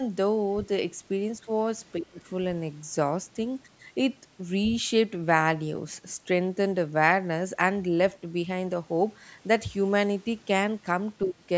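At 1.86 to 1.91 s, and again at 3.29 to 3.35 s, a brief scrap of the other side's voice leaking through can be heard. It is very faint, roughly 40 dB under the speech. This is likely the far end playing on the talker's loudspeaker and being only partly removed by the echo canceller. On a spectrogram these show as pale, short smears of harmonic energy that don't line up with the main speech. The waveform barely changes.

Speech is suppressed in double talk from 1.98 to 2.19 s, and again from 11.26 to 11.42 s, for roughly 200 ms and 150 ms. The talker's level falls by about 30 dB in the first and about 20 dB in the second, so the sound dips. This is likely the canceller turning everything down when both sides spoke at once. The waveform shows a sudden narrowing of the envelope. The spectrogram shows a darkened band across the whole range up to the 8 kHz ceiling.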